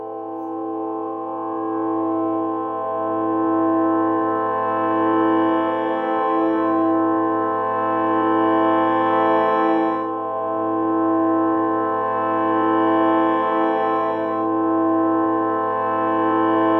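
No technical faults can be heard anywhere in this recording of sounds. Nothing in the audio points to a problem with how it was captured or delivered.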